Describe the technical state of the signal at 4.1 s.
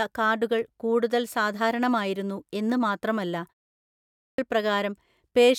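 At 4.1 s the speech bursts abruptly out of silence with its opening sounds missing, right after "കൂടുതൽ സാധാരണമായിരുന്നു എന്ന് മാത്രമല്ല". This is a clipped start after a pause, spanning 3.91 to 4.38 s: after a 0.46 s pause the output device was still waking, so about 0.47 s of sound was swallowed.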